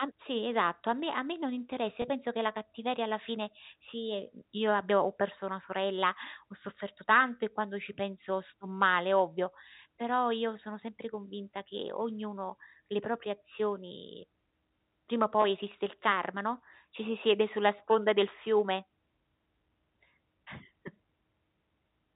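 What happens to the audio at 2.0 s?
At 2.02 to 2.04 s there is a brief packet loss with pitch repetition. About 20 ms of audio drops out, which fits a single lost packet, and the receiver fills the gap by repeating the last pitch cycle. The result is a slightly held, buzzy tone before the sound resumes.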